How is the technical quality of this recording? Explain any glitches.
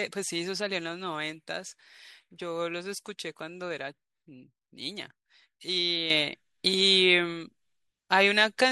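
There is one clear glitch. At 6.10 s a sudden gain jump lifts speech and background noise together by about 9 dB until the end, likely an unramped digital gain change; the waveform steps up abruptly, with a brighter spectrogram band.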